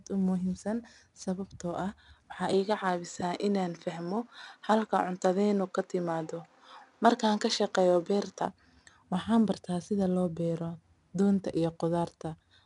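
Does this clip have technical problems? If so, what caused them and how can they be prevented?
Yes. Throughout the clip, 4-bit ADPCM compression leaves a gritty hiss that rises and falls with the speech and roughens sharp attacks. Unlike steady background noise, it vanishes in pauses. Nothing is present above 10.7 kHz, which fits a sample rate near 22 kHz. Recording or exporting to a lossless or higher-quality format prevents it.

From 2.53 s to 8.45 s the band narrows further, with nothing above 7.9 kHz, and a new noise floor appears about 45 dB under the speech. The level stays the same and there is no gap at either edge, so it is a clean change of tone rather than a dropout. The likely cause is the input switching to a poorer device. Locking the recording input to one fixed microphone prevents it.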